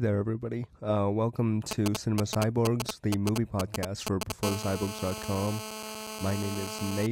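From 1.71 s to 4.32 s there's a run of GSM signalling bursts: a 2G phone somewhere close is only sending short clusters of transmissions, the sort it does while handshaking with the network, and the audio circuitry is rectifying that radio energy into sound. You get the classic galloping dit-dit-dit, little ticks and brief buzzes at about 217 Hz, and they're roughly as loud as the speech itself, so they really stick out.

Then from 4.43 s to 7.07 s it turns into steady GSM phone buzz, which fits the phone having gone into an actual call and now transmitting its bursts continuously, 217 times a second. The rectified pulses come through as a hard, raspy tone at 217 Hz loaded with harmonics, sitting about 9 dB under the speech and running the whole time without any connection to what's being said.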